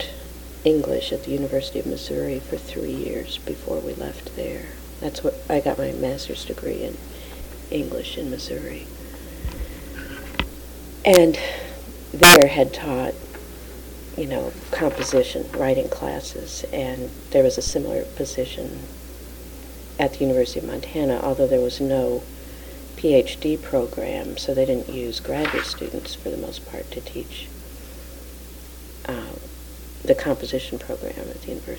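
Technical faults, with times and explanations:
11.14–11.16 s and 12.23–12.42 s, integer overflow: violent, splintering cracks on the loudest peaks, far harsher than clipping. Peaks pushed past the largest integer, by about 7 dB in the longer second burst, wrap to the opposite sign and swing across the full range instead of being limited.
17.67–17.76 s, phantom power thump: a deep, abrupt thud that dies away in about 20 ms. A supply switched on or off on the live input sends a voltage step through the coupling capacitors, which then drains away as the low, decaying bump.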